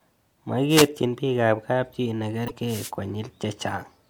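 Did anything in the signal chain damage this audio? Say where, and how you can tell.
Yes. At the wireless link feeding the analogue input, two wireless microphone noise hits appear, from 0.69 to 0.88 s and from 2.67 to 2.91 s. Each is a short swish of static over the speech, as the FM carrier fades under reflection cancellation and receiver noise rises through the signal.

At the codec stage, damaged data in a compressed stream shows up between 2.44 and 2.51 s as a brief chirp or blip. Corrupted bytes in the encoded frames there are misread, and the decoder loses sync and hunts for the next valid frame header.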